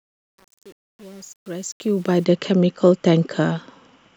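From the very start up to about 2.25 s there's truncation distortion on the fade-in. The gain stage appears to keep too few bits with no dither, about what you'd expect from an 8-bit path. At those low levels the waveform collapses into coarse square steps, so the first 2 seconds or so sound gritty before the speech comes in cleanly.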